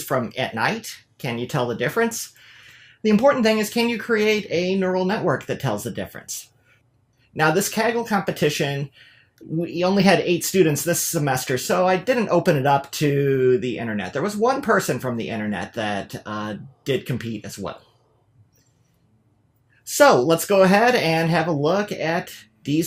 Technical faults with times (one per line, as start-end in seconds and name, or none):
none